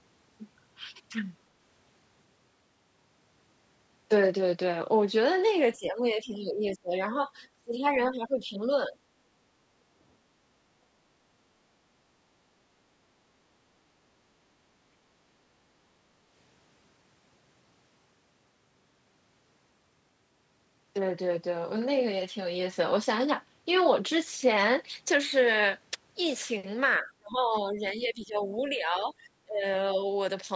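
Speech suppressed in double talk occurs at 5.78–6.95, 7.55–7.86, 8.11–8.71 and 8.88–8.95 s. The speech dips and breaks up, by as much as roughly 30 dB, likely because the echo canceller clamped down while both sides talked at once. Background gated by the echo canceller follows at 9.58–10.0 and 10.21–10.33 s. Here only the room sound sinks, by about 7 dB, and recovers once the echo canceller lets go. Double-talk suppression returns at 26.99–29.64 s, pulling the speech down by around 20 dB. Unlike the gating, it cuts into the talker rather than just the background.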